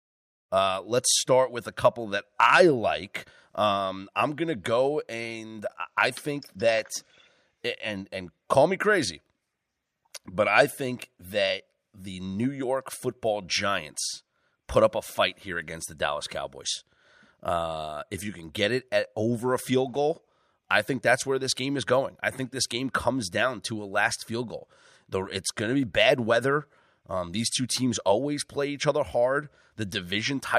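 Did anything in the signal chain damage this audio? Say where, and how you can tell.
No, nothing in the signal chain damaged this audio.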